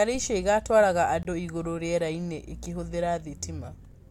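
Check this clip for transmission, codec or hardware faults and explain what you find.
One fault is present: a block of digital silence from 1.23 to 1.25 s, just after "icio ĩgatwaraga". The speech drops abruptly to silence for 20 ms, likely a buffer that wasn't filled in time, leaving a short hole.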